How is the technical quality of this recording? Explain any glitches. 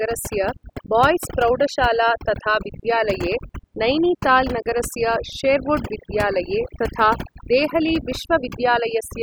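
The recording is marred by overdone noise removal running throughout the whole clip. A noise reduction process set far too aggressively is pulling individual frequency bands down or cutting them entirely whenever their level sits close to its estimate of the background noise. Quieter components of the speech fall below that threshold and vanish along with the noise. The gaps between phrases drop to near silence scattered with twinkling, chirpy specks.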